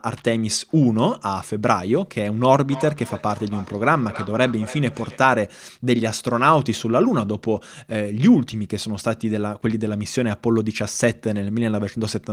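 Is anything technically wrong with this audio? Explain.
Yes. From 2.67 s to 5.29 s the speech has feedback echo between two devices. Two devices in the same room are on one call; one plays back what the other's microphone sent, and that microphone picks the sound up again. Each device's echo canceller removes only its own playback, so the loop survives. Each stretch of speech returns about a third of a second later, thinner and more ringing, peaking about 14 dB below the direct speech.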